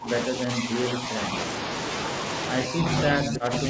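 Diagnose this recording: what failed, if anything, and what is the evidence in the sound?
Speech suppressed in double talk at 0–0.1 s, 0.27–1.37 s and 2.66 s to the end. Speech dips by about 20 dB, then only slightly, then about 15 dB. This is call processing, likely an echo canceller attenuating both near speech and returning echo.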